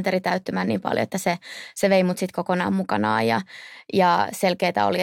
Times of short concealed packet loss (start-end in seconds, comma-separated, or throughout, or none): none